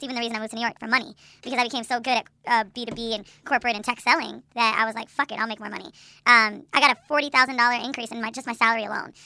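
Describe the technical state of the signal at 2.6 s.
At 2.6 s the speech is affected by a wrong sample rate fault, which runs through the whole clip rather than starting or stopping near this point. The samples are clocked out faster than they were captured, with no resampling, so duration and pitch shift together: everything runs 1.38 times too fast and sits about 5.5 semitones high. That ratio fits 16 kHz material played back at 22 kHz. The voice sounds hurried and thin, with a chipmunk-like lift in formants and pitch.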